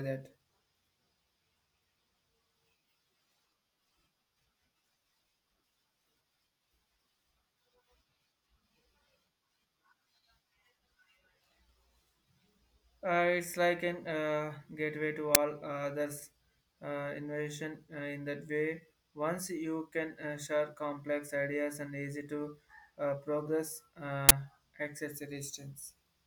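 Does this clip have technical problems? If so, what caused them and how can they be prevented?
Yes. A harsh, loud burst of digital noise cuts through the speech at 15.35 s, and another at 24.29 to 24.31 s. This is an uninitialised buffer: a block was played before any audio was written into it, so leftover memory came out as samples. The first burst's length fits a 512-sample buffer and the second fits a 1024-sample buffer. To prevent it, zero-fill every buffer on allocation and output silence until real audio is ready.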